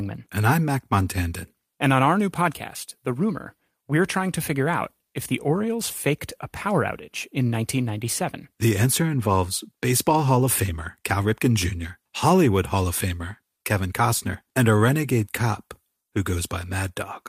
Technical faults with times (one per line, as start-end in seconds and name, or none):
none